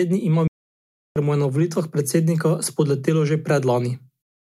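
The input signal to the recorder was likely lost for a moment, through a disconnected device, a broken link or an accidental mute, while the recording carried on writing silence. In this speech clip the result is an audio dropout to silence from 0.48 to 1.16 s: the speech cuts off abruptly, leaving about 0.68 s of total silence with no room tone, then resumes mid-flow, and whatever was spoken in that gap is missing.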